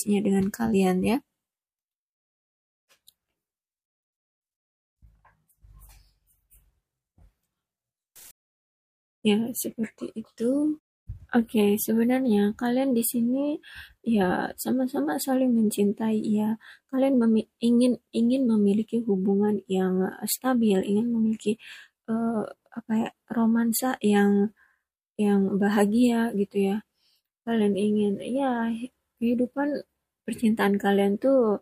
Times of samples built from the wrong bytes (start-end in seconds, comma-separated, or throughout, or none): 8.16-8.32